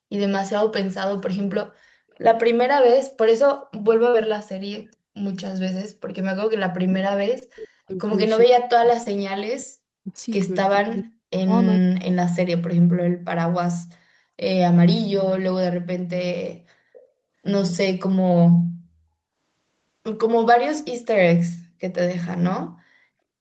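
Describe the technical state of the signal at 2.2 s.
A very faint echo leak sits at 2.14 to 2.18 s: a brief copy of earlier speech arriving about 424 ms late, likely from incomplete echo cancellation, visible as a faint duplicated smear on the spectrogram.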